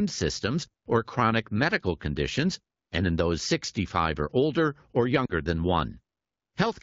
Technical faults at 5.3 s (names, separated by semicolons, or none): lost AMR speech frames